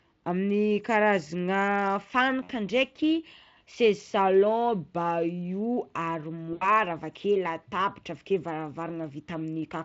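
Speech packets were lost twice, and the decoder's VoIP packet loss concealment extended its last pitch and filter at falling gain: 60 ms at 2.43 to 2.51 s, and 80 ms at 6.53 to 6.67 s, just before "avakeo latabatra avakeo". Each gap becomes a brief buzzy tone or coloured noise that fades.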